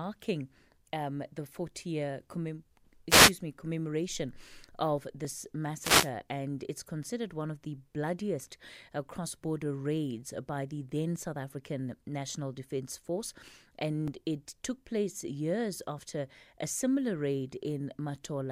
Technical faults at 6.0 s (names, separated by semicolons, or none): wireless microphone noise hit